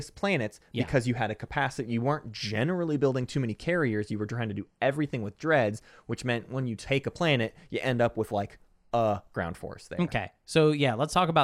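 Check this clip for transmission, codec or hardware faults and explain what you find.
No faults found; nothing in the speech points to a problem anywhere along the signal path.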